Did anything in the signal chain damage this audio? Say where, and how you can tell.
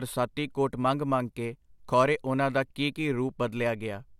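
No, nothing in the signal chain damaged this speech recording. No stage between capture and playback leaves any audible sign of damage.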